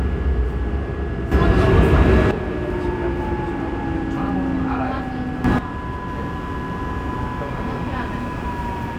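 A gain setting was likely applied from one sample to the next with no ramp. At 1.32 s the level jumps up by about 11 dB, sound and background noise together, and drops back at 2.31 s. The sudden gain jump returns from 5.44 to 5.59 s, about 10 dB this time.

From 6.05 s to the end, switching spikes from a dimmer, rectifier or unshielded path leak in twice per 60 Hz mains cycle. Their harmonics stack into a steady, raspy mains buzz sitting around 30 dB below the sound.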